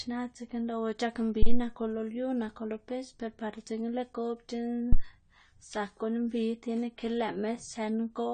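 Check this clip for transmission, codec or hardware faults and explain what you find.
Two faults are present: band-limited, degraded speech throughout, and two phantom power thumps.

Across the whole clip, nothing reaches above 9 kHz and the speech sounds dull and smeared, with a fizzy, warbling edge on sibilants. The likely cause is AAC compression at a low bitrate, consistent with about 32 kbps, where the encoder lowers its cut-off and coarsely quantises the remaining bands.

Phantom power thumps occur at 1.42 to 1.62 s and at 4.93 to 5.04 s. Each is a deep, low-frequency thud from a supply step passing through the input coupling capacitors. The first decays in about 45 ms and the second in about 26 ms.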